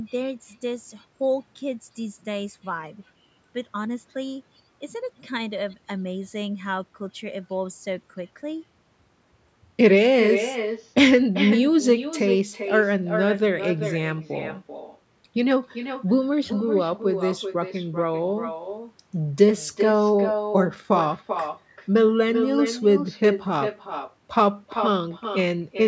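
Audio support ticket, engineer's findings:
Speech shadowed by a quieter, thinner repeat about 8 dB down, roughly 0.4 s late, throughout. Echo with no canceller: far-end loudspeaker feeding its own microphone back uncancelled.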